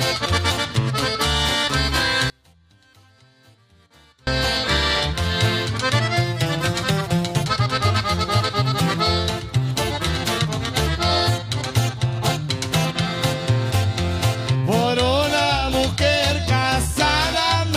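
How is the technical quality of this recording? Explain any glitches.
The recording has one clear glitch. From 2.3 to 4.27 s, the sound nearly disappears. It drops by about 33 dB, leaving only a faint trace. The likely cause is one channel inverted. One stereo channel has its polarity reversed. When the two channels are summed to mono, everything they share cancels out. Only the small difference between them survives. That residue is what remains audible until the level returns at 4.27 s.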